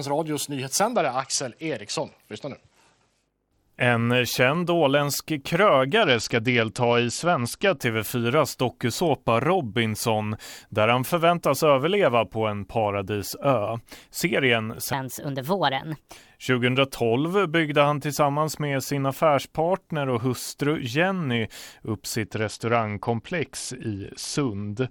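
Bluetooth SBC bit pool drops occur from 0.93 to 3.70 s, from 6.03 to 7.79 s just after "känd åländsk", and from 22.23 s to the end. Each time the treble dulls and gritty noise rises, which points to the link falling from a bit pool of 31 to about 10, near 77 kbps, starving the upper sub-bands and coarsening the rest.

A section at the wrong speed runs from 14.93 to 16.17 s. The speech is 1.33 times faster and about five semitones higher, hurried and raised in pitch together, most likely from playback or editing against the wrong clock.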